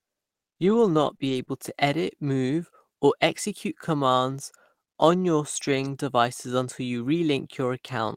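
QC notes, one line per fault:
0.65–1.49 s: scattered short gaps. About three brief dropouts, none longer than about 20 ms, were patched by extending the preceding sound, leaving ticks and small smears visible as stretched columns on a spectrogram.
5.55–5.93 s: lost packets rebuilt from error correction. About 200 ms was replayed from low-bitrate redundant copies, so there is no silence, but the sound turns rougher and noisier, with grainier spectrogram texture.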